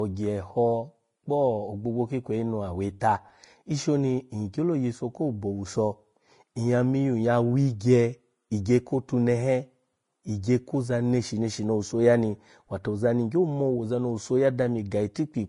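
Low-bitrate encoding, likely Vorbis compression at around 30 kbps, has degraded this speech clip throughout. Nothing remains above about 10.5 kHz, and the coarsely quantised treble turns fine detail into hiss, leaving the sound grainy, with roughened tones and softened attacks.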